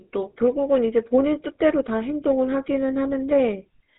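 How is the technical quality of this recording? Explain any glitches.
The speech carries plainly audible GSM full-rate codec damage from start to finish. Throughout, the voice has a buzzy, gravelly roughness, which fits the 13 kbps full-rate coder. It models the vocal tract as a filter and excites it with regularly spaced pulses, keeping only every third excitation sample, so fine detail becomes coarse grit. On a spectrogram, energy stops sharply at about 3.9 kHz, and harmonics look smeared and grainy rather than cleanly striated.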